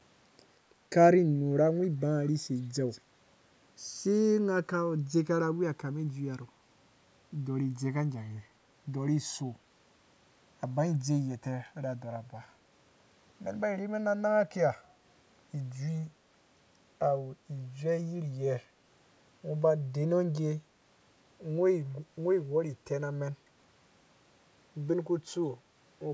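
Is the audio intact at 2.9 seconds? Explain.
No. From 2.9 to 3.0 s there is an echo leak. The likely cause is that the far side played the call over a loudspeaker and its echo canceller failed to remove everything its microphone picked back up, so some of that returned down the line. It is heard as a faint delayed copy of the speech, trailing the original by 182 ms at about 20 dB below it, a brief ghost rather than a sustained echo.

Running through that moment, and the whole clip, the channels are drifting apart. The two channels were captured on devices with separate clocks that disagree by something like 70 parts per million, so the offset between them creeps steadily, reaching roughly 2 ms by the end. Summed to mono, the resulting comb-filter notches sweep slowly across the spectrum, giving the sound a gradual flanging, hollow-then-shifting quality. The call's microphone processing limits the audio to nothing above 8 kHz.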